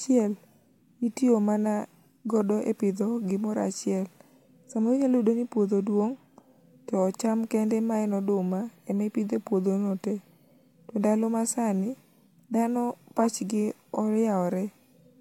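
No technical faults can be heard anywhere in the recording.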